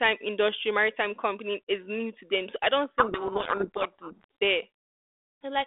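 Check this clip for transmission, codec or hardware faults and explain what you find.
One fault, a codec payload misread, over the telephone-band G.726 line. From 2.98 to 4.24 s, just after "I don't", the speech sinks under harsh, grinding distortion: the decoder is reading each G.726 code word's bits in reversed order, so every step lands wrong.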